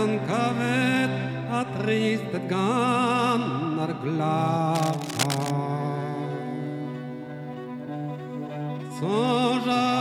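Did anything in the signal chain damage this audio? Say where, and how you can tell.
Yes: cable scratch noise from 4.75 to 5.51 s, in the analogue wiring. Dense, irregular scratching and rustling bursts sit only a few decibels below the sound there. The likely cause is a worn lead or connector being moved, its contact resistance fluctuating rapidly.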